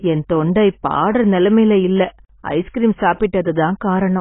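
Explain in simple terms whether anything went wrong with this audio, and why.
Yes, something went wrong, and it lasts the whole clip. The speech sounds dull and muffled, as if heard through a wall. Nothing is left above about 3.8 kHz, so the crisp edges of sounds like s and t are gone. The damage is heavy, with a smeared, warbly texture. The likely cause is AAC compression squeezed too hard. To save space, the encoder threw away the high end and coarsened the rest.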